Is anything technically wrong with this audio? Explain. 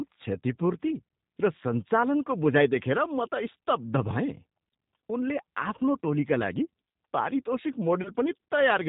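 Yes. Throughout, the speech carries G.729 codec damage: rebuilt from a vocal-tract filter and sparse pulses, it sounds rough and synthetic, cut off above 4 kHz, which fits an 8 kbit/s codec rather than plain band-limiting.

From 8.03 to 8.10 s, VoIP packet loss concealed by the speech codec: about 20 ms of missing audio is filled by extrapolating the last pitch, giving a brief, fading buzzy tone or coloured noise rather than a silent dropout.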